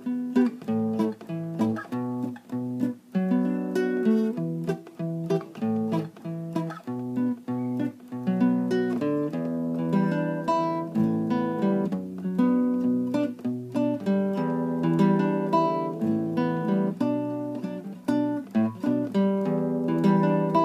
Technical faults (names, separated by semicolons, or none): none